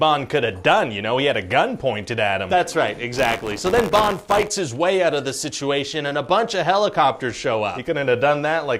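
From 3.13 to 4.48 s there is buffer tearing: the write and read positions have slipped, so a small slice of each period, just under a tenth, repeats audio about 20 ms old. The hard joins produce a rattling 93.8 Hz buzz, which fits a 512-sample buffer.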